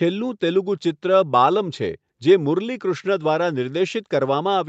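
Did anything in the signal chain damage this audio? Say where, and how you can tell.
No, nothing in the signal chain damaged this audio; the top end stops around 8 kHz, as expected from the call path it went through.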